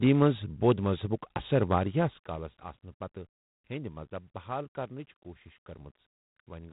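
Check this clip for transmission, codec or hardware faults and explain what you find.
Two faults show up in this speech clip: plainly audible ADPCM coding all the way through, and a stretch of zipper noise on a level change early on.

The G.726 ADPCM damage runs the whole length. It sounds like 24 kbit/s, so each sample gets only a few bits of difference from the codec's running prediction. That leaves a harsh, rasping hiss that rises and falls with the speech, and nothing gets through above 3.8 kHz.

The zipper noise runs from 1.71 to 2.65 s, just after "بود مذہبُک اثر". The level drops by roughly 15 dB in unsmoothed 2 dB jumps, about seven a second. Each jump clicks, so you hear a ticking zip riding on the fade.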